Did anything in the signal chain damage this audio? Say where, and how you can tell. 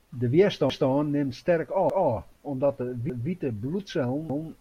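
Yes. The damage comes from chunked buffering or processing: the speech was handled in 1.0 s chunks that overlap, so each new chunk starts 200 ms before the previous one ended. The overlapping chunks replay that 200 ms slice at every join, heard as a regular stutter at 0.70–0.90 s, 1.90–2.10 s, 3.10–3.30 s and 4.30–4.50 s. The 1.2 s spacing of the repeats fits a 1.0 s chunk plus the 200 ms overlap.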